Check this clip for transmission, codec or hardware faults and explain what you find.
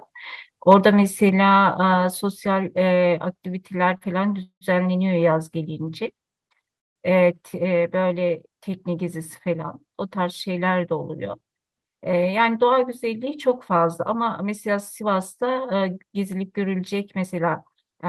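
Four kinds of fault turn up in this speech clip: a brief overload near the start, a short stall, two freezes close together, and a stretch that runs fast.

From 0.71 to 0.74 s, the loudest moment takes on a harsh, crackling edge, with peaks pushing about 3 dB past the converter's limit and a small share of samples flattened at that limit. This is likely microphone overload: the input gain was set too high, so the converter ran out of headroom and sliced the tops off the waveform, adding distortion.

Between 3.97 and 4.04 s, a sound hangs on a touch too long, held for 32 ms with a faint buzz or dip before the speech carries on with nothing skipped. This is a short stall from a late packet. The packet wasn't there when the receiver needed it, so the jitter buffer emptied and the last sound was stretched until it arrived. Playback then resumed from the same point, 32 ms later.

Two longer interruptions follow. 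From 4.43 to 4.64 s, the sound smears into a fading buzz or hiss and then drops to silence for 90 ms, adding 184 ms in all. From 6.79 to 6.99 s, a short tail gives way to 160 ms of silence, adding 168 ms. These are likely call audio freezes: packets were held up in transit, the jitter buffer ran dry, and the receiver filled the wait until delivery resumed. The speech picks up where it stopped, so the gaps are inserted rather than cutting anything out.

From 12.40 to 15.04 s, the speech sounds slightly hurried, running at 106% of normal speed while the pitch stays put. This is jitter buffer speed-up. After the delays, the buffer held more audio than its target, so the receiver trimmed tiny pitch-period-sized slices again and again to catch up, removing about 150 ms across the stretch.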